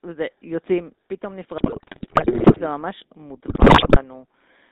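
The whole clip carries the sound of the GSM full-rate codec. The speech is confined to a narrow band of about 250 Hz to 3.7 kHz. The coder rebuilds the voice from a vocal tract model driven by a sparse pulse train. Only every third excitation sample survives. That thinning gives the plainly audible buzzy, gravelly roughness heard here. The texture fits the 13 kbps full-rate coder.

From 1.58 to 2.61 s, GSM bit errors break in. Corrupted filter, pitch and gain values reach the decoder. The spectrum bends and the level jumps from frame to frame. The speech dissolves into squawks, pops and gargling. A second burst runs from 3.48 to 4.03 s. It is shorter but harsher, which points to a much higher error rate on the link. The damage is denser.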